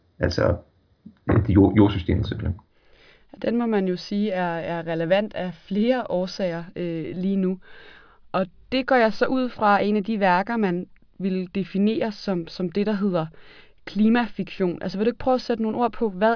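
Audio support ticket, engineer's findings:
Listened through the speech recording and nothing stood out as a fault.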